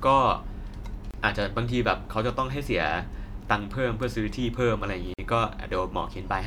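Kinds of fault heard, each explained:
Gap at a join of encoded pieces: the speech drops into silences of 29 ms at 1.11 s and 49 ms at 5.14 s, with smeared edges, then resumes where it stopped. Separately encoded four-second pieces were joined with encoder delay and end padding left in.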